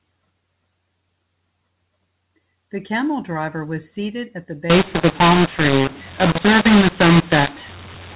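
Speech over a telephone-band line. From about 4.70 s to the end there's a mu-law and A-law mix-up: levels turn harsh and scrambled and the pauses fill with noise, which fits A-law audio being decoded as mu-law.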